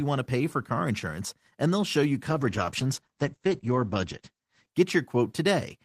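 Right after "and they'll show you", at 2.3 s, there's a call bitrate drop that lasts until about 4.77 s. The audio goes muffled and rough, with the top end gone. That fits the encoder being squeezed from around 32 kbps down to roughly 12 kbps, which forces coarser coding and pulls the bandwidth in from 20 kHz to 8 kHz. It sits at its worst for about 2.4 s before the fuller sound returns.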